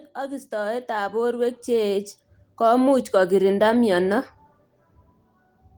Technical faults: automatic gain rising

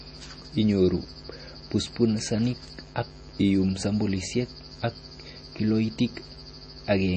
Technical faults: MP3 compression

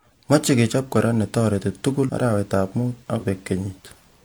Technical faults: compressed frames skipped

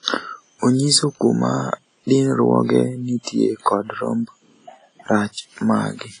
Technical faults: WMA compression; pre-echo

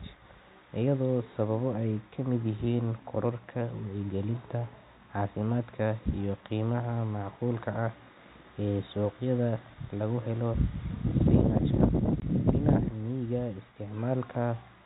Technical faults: packet loss filled with silence

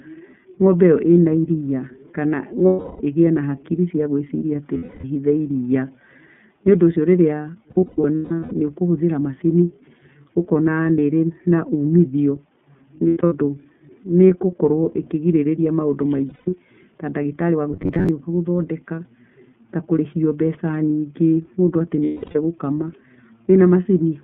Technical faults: iLBC codec; lost iLBC frames; robotic sound from repeated short buffers

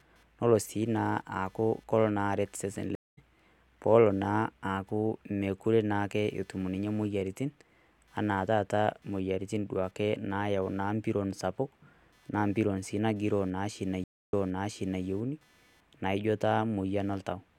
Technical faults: computer activity noise; stream reconnect

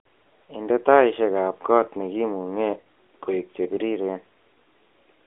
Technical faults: AMR narrowband mobile codec; lost AMR speech frames

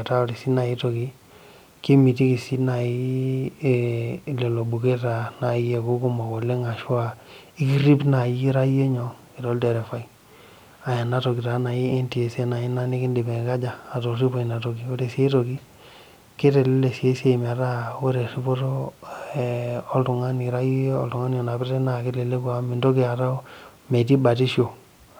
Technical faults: none

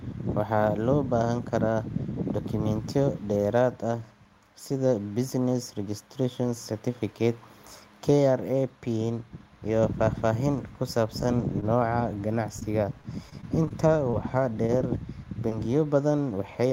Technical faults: repeated packet loss (robotic sound); short concealed packet loss; short stall from a late packet

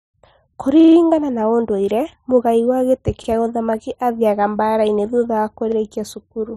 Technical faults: repeated buffer

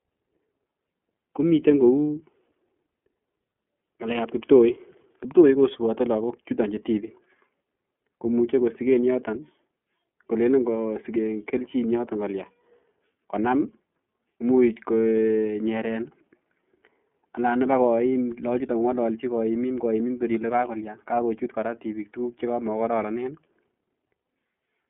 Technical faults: iLBC codec

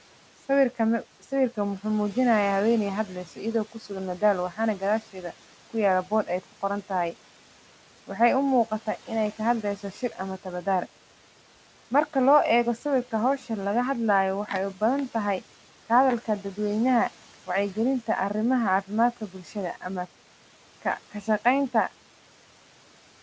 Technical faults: noise suppressor artifacts; speech cut by the noise suppressor

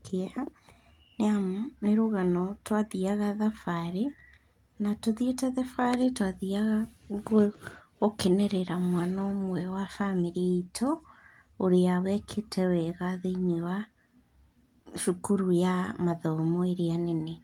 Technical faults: none

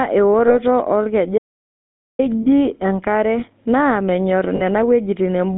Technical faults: GSM full-rate codec; lost GSM frames; audio dropout to silence

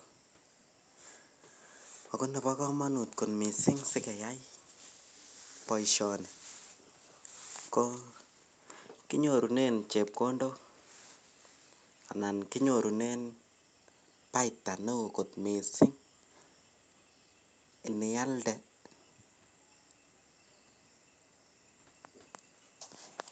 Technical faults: none

